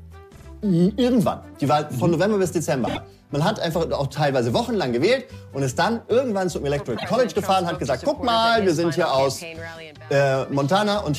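Repeated frames: the same compressed data was decoded more than once, so the audio stutters. A roughly 52 ms block plays twice more at 0.35 to 0.46 s, a 26 ms block three more times at 2.86 to 2.97 s, and twice more at 6.96 to 7.05 s.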